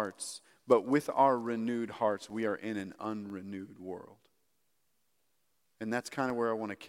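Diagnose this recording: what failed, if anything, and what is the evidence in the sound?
Regular ticks every 0.5 s from 2.3 to 6.3 s, starting after "with our renewed hearts": periodic USB or driver dropouts at the driver stage, each blanking about a millisecond with silence.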